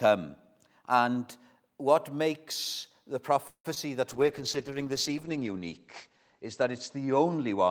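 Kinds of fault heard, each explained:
Call audio freeze: From 3.47 to 3.67 s the speech stops moving forward. The last sound is stretched into a fading buzz or hiss for about 170 ms, with roughly 90 ms of near silence at its end. When the audio resumes it picks up where it left off, so nothing is lost. The whole call now runs about 170 ms later. Packets held up in transit, draining the jitter buffer, are the likely cause.
Short concealed packet loss: Just after the freeze, at 3.75 to 3.78 s, a brief stretch of audio never reaches the decoder. About 20 ms is missing. The receiver fills roughly 14 ms of it by carrying the previous sound forward, then blends back into the real signal. The result is a quick smear or wobble rather than a clean gap. A short consonant there could be swallowed.
Call bitrate drop: From 4.11 s to the end, the encoder's budget falls from 48 kbps to 10 kbps. The audio bandwidth narrows from 20 kHz to 8 kHz, so the speech loses its air and sibilance and sounds muffled. 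Coarser coding adds a rough, watery texture. The lowest rate holds for about 1.4 s. The sound stays degraded through the close of the clip.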